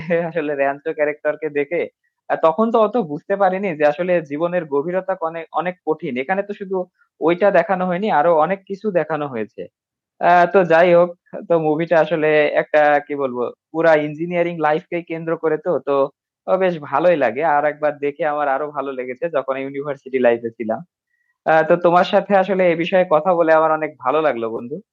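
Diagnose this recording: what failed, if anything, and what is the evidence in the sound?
Near the very end of the speech, from 24.57 to 24.60 s, a brief smeared, phasey patch replaces the signal. This is AAC frame loss with concealment. About 20 ms went missing, which fits two lost 10 ms low-delay frames, likely from the AAC-ELD network stream. The decoder filled the gap by repeating the last good spectrum with scrambled phase.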